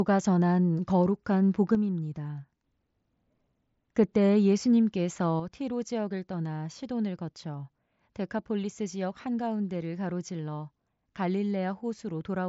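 At 1.75 s the sound drops abruptly by about 6 dB. It stays there until 2.64 s, then returns to full level. At 5.40 s the same drop happens again and lasts to the end of the clip. Both steps are instant, with no fade. The likely cause is one channel dropping out. With one stereo side lost, the mono sum carries only half of the shared speech. Anything present only in the missing side is gone, all within the headset's band topping out near 7.7 kHz.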